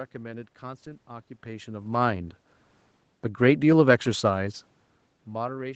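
No system faults; the speech shows only the expected call-path band limit at 8 kHz, room noise, and level shifts from the talker moving around 1.5 s and 4.5 s.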